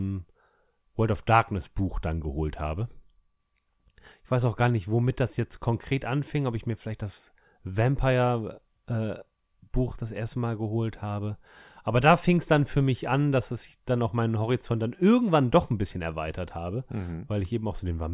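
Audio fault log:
Nothing stood out on listening to the speech in this recording.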